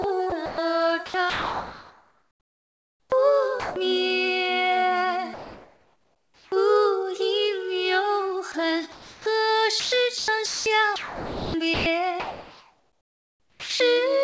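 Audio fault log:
0.02–3.76 s, 8.52–9.26 s and 9.80–13.80 s, sound chopped by the voice detector: the sender's voice detector keeps flipping between sending and muting, so quieter bits and the edges of sounds get swapped for synthetic comfort noise. That's about 2.2 s replaced in the first stretch, 0.36 s in the second and 2.7 s in the last. It sounds choppy. It's likely DTX gating with comfort-noise fill, and it sits on a call path where nothing gets through above 8 kHz, which fits a G.722-style codec.
5.34–6.52 s, comfort noise in place of the background: for about 1.18 s the real background drops out and a smooth, featureless hiss fills the gap. That's likely the sender stopping transmission during a pause, with the receiver generating noise shaped roughly like what was there. The level doesn't move at all, sitting about 35 dB below the loudest parts, so you notice the missing texture and detail rather than any dip in volume.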